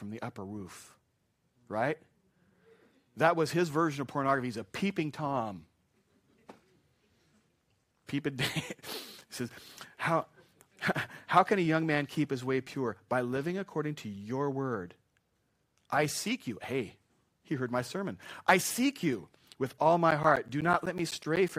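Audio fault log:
20.11–21.49 s, periodic USB or driver dropouts: just after "seek you with all", the speech is broken by about ten brief gaps, one every 0.125 s, each losing roughly 10 ms of audio that is replaced by silence. Something blocking the USB bus or audio driver at a fixed interval starves the stream for an instant each time, so the abrupt cut-outs and restarts land as an evenly spaced train of ticks riding on the speech.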